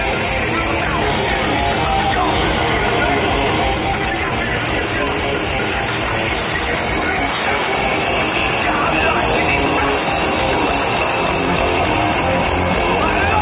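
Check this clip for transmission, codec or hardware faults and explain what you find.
One fault shows up, a stretch where the jitter buffer sped the audio up, heard over a narrowband call path that stops at 4 kHz, as G.711 would.

Jitter buffer speed-up, 3.74 to 5.60 s: the receiver trimmed repeated pitch-period slices to drain a backlog, removing about half a second, so the sound runs 128% fast at unchanged pitch and feels hurried.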